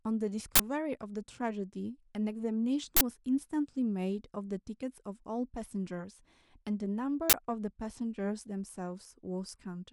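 Speech with three bursts of harsh digital noise at 0.56, 2.97 and 7.30 s, each lasting about 43 ms, which fits a 2048-sample buffer. This is an uninitialised buffer: a block was played before any audio was written into it, so stale memory came out as samples. Unlike a dropout, which leaves silence, or a single click, each event is a loud, full-length block of unrelated noise.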